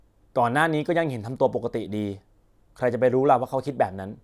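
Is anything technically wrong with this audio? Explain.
No, nothing technically wrong can be heard in this speech recording.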